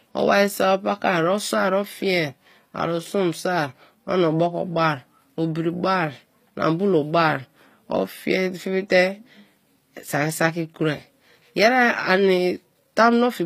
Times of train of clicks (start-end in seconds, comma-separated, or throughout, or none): none